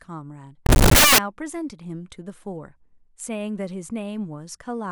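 From 0.66 to 1.18 s, the speech turns into loud, harsh broadband noise. These are samples built from the wrong bytes. The reader misassembles each sample, so the fast-changing low bits land in the high positions.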